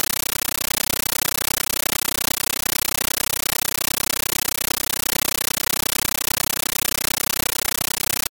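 Harsh, very loud chattering static runs through the whole speech clip and replaces the speech itself, with bursts of noise about 13.3 ms long repeating 31.25 times a second, each followed by silence. This is a compressed stream played as audio: an AC-3 (Dolby Digital) bitstream, consistent with a 640 kbps encode, was passed over the digital link and treated as plain samples instead of being decoded. Each packed frame comes out as a noise burst followed by zero padding.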